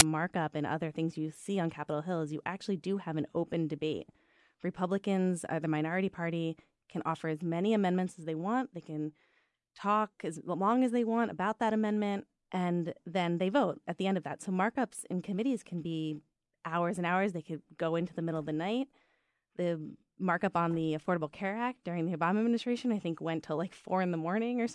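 File tags played as audio at 0.0 s: an embedded cover picture in the tag block is read as sample data. Because the image is compressed, it comes out as a very brief burst of very loud white noise with hard edges, just before "markup and other things".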